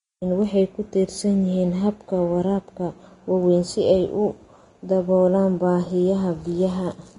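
From start to finish the speech carries plainly audible damage from what is likely Vorbis compression at low quality. Nothing sounds above 10.6 kHz, and the treble that's left has been quantised so coarsely that its detail turns into hiss of roughly matching energy, so sibilants come out grainy, tones sound roughened and attacks blur. The amount of damage points to a low bitrate, something around 31 kbps.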